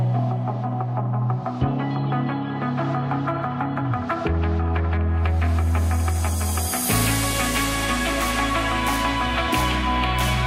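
No technical faults can be heard anywhere in the audio; the signal stays intact and steady throughout.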